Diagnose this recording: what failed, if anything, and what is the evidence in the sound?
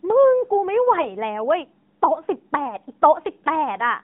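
Codec stage: the whole speech clip has passed through the AMR narrowband mobile codec. The band runs only from about 150 Hz to 3.7 kHz, and the voice sounds plainly buzzy and synthetic, which fits a mid-rate mode around 10.2 kbps. The pulse-driven vocal-tract model replaces the natural waveform.

Network stage: lost AMR speech frames occur at 1.02 s and 2.66 s. Each is a single 20 ms frame that failed over the radio link. The decoder filled the gap by repeating the previous pitch and tract settings at reduced gain, so each loss is heard as a brief dip or warble.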